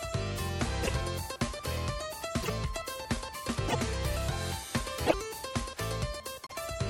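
At 0.82–0.91 s, 2.42–2.50 s, 3.67–3.76 s, 5.06–5.14 s and 6.47–6.52 s the audio jumps ahead and leaves a brief garbled burst, chirp-like or noisy, lasting about 80 ms each (56 ms at the last). The likely cause is a broken MP3 bit reservoir. Frames went missing, so the next frames read their borrowed bits from the wrong data. Each span fits two or three 26.1 ms frames. A spectrogram shows short, smeared vertical bands, and the waveform shows abrupt discontinuities.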